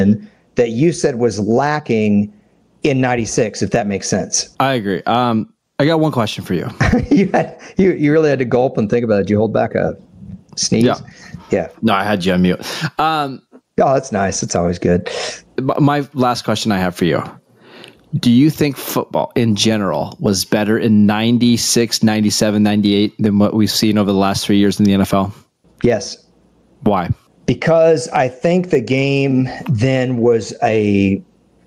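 Gain pumping runs throughout: the level ducks under each loud syllable by around 15 dB, likely from excessive input gain driving a fast limiter.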